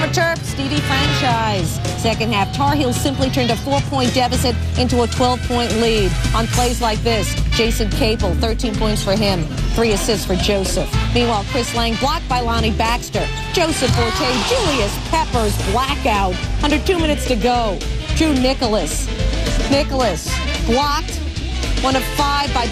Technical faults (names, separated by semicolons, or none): MP2 compression; DAB burbling